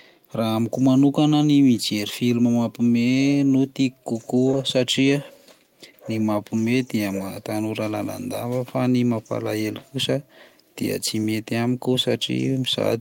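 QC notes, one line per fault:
4.51–4.55 s, short concealed packet loss: about 20 ms of speech arrived too late for the decoder, so the receiver filled the gap by extending the preceding sound, then crossfaded back into real audio, leaving a brief smear or wobble where a short consonant may vanish.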